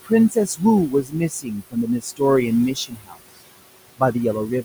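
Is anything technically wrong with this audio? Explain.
Yes. Throughout, there are noise suppressor artifacts. The suppressor pulls the room noise, which sits about 15 dB below the speech, down by about 20 dB frame by frame, so it ducks in pauses and lifts under speech.

There is also speech cut by the noise suppressor at 0.29–0.62 s, 0.9–1.76 s, 2.0–2.21 s and 2.74–3.17 s. The suppressor mistook parts of the speech for noise and pulled them down by about 18 to 22 dB, so soft sounds come out swallowed and faint.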